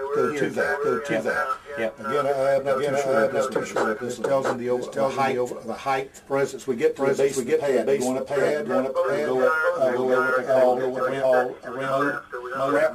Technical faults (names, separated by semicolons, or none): doubled audio track